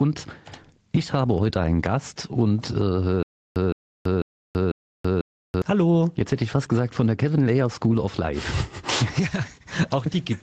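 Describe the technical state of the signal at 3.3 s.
At 3.3 s the stream has likely stalled, and the player is retrying by replaying the last fragment it held before running dry. That produces a stutter with silent gaps from 3.23 s to 5.62 s. A 164 ms burst of the same audio repeats four times, each followed by about 332 ms of digital silence, so it returns at an even pace of one every 0.5 s. Whatever should have played across that stretch is gone.

Underneath this, the input gain is likely set far too high, so a fast limiter or compressor is clamping down whenever something loud arrives. The result is gain pumping, a swing of around 10 dB. The level difference between loud and soft passages shrinks, and the sound comes across flattened and squashed. This happens across the whole clip, including during the repeated bursts at 3.3 s.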